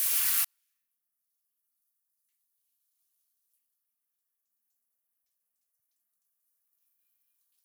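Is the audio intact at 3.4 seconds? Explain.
No. At 3.4 seconds the sound is inside a 24-bit alignment error that runs from 0.45 s to the end at 7.65 s. Samples sitting in the low 24 bits of each 32-bit word are read as full 32-bit values. The level falls by about 48 dB. The sound stays clean but is barely audible.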